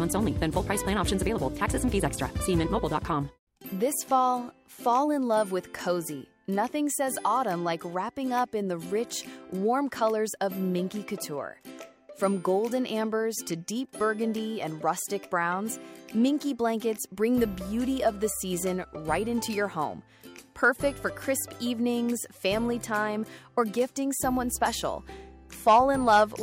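Hard clipping appears twice in this audio: briefly from 20.64 to 20.69 s with about 1 dB of overdrive, then from 25.68 to 26.23 s with about 3 dB. The signal exceeds what a stage can pass, so peaks are flattened, adding high harmonics heard as crackle and harshness.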